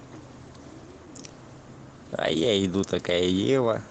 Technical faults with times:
none

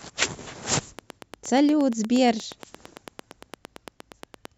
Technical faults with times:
0.99-4.46 train of clicks

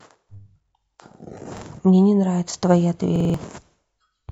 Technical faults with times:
1.58-1.63 repeated buffer
3.16-3.34 repeated buffer

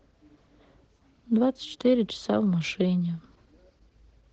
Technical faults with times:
0.00-4.33 Opus voice compression

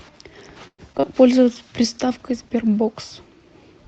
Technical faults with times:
0.67-1.05 repeated packet loss (robotic sound)
1.26-3.88 call bitrate drop
1.33-1.95 jitter buffer slow-down

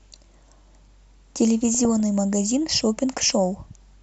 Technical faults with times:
0.00-4.02 MP2 compression
1.74-2.00 DAB burbling

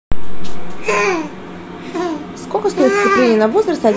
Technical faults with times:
none

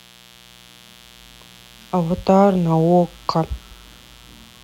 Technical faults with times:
0.00-4.63 mains buzz

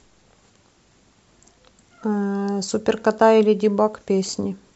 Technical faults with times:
4.27-4.29 lost LE Audio frames

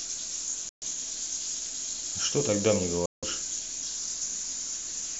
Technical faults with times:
0.69-0.83 Bluetooth dropout
3.06-3.24 Bluetooth dropout

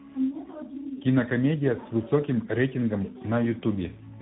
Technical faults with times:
0.00-4.22 tandem speech coding

